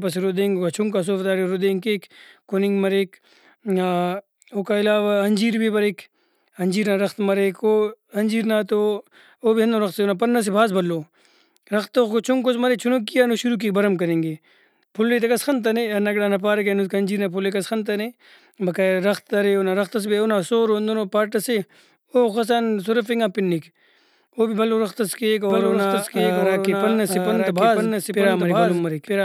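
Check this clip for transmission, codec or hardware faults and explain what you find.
A doubled audio track appears from 25.5 s to the end. A second capture path or an out-of-step edit likely feeds the speech in twice, so a full-band copy about 5 dB quieter trails roughly a second behind, starting abruptly, with no decay or room colour.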